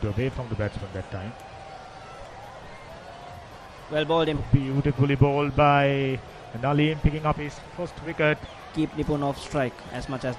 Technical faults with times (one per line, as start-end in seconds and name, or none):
none